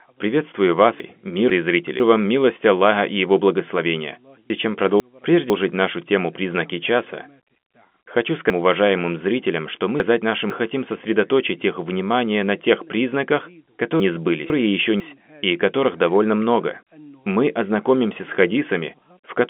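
Four spots have chunks out of order, all in half-second pieces. From 1.0 to 2.0 s, a 500 ms chunk shows up one slot late, so the sound jumps at each hard join. Same at 4.5 to 5.5 s, just before "нашу тему". From 8.5 to 10.5 s it's worse: a chunk lands three slots late, so the jumble runs longer before "хотим сосредоточить их внимание". From 14.0 to 15.0 s, between "внимание на тех признаках" and "и которых довольно много", one chunk is again one slot late, all of it heard through the telephone band, which tops out around 3.7 kHz.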